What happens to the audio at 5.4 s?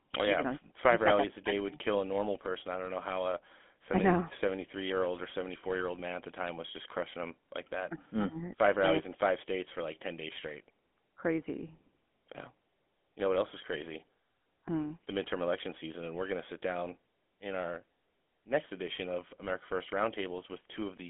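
GSM full-rate codec damage is present at 5.4 s, as throughout the clip. The speech is rebuilt from a vocal-tract model driven by regular pulses, consistent with 13 kbps GSM, and confined to roughly 200 Hz to 3.4 kHz, leaving a buzzy, gravelly roughness.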